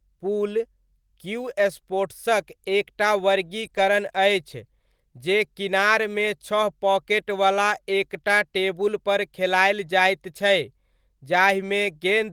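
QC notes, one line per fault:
3.61–3.67 s, 3.73–3.79 s and 9.86–9.88 s: lost packet rebuilt from error correction. Packets dropped right after "क्यू स्पोर्ट्सक एक टा" and between "एक टा टेबुलपर खेलायल" and "जाइत छै" were replayed from low-bitrate copies carried in the next packet, 40, 40 and 20 ms. With no gap or smear, there is only a brief rougher, noisier grain.
3.69–3.87 s: short concealed packet loss. About 20 ms of speech never arrived, and the decoder extended the preceding sound for 13 ms before blending back. It stretches timing by a little over a hundredth of a second. Unlike the rebuilt packets, this is a guessed continuation, heard as a brief smear or wobble rather than coarser texture.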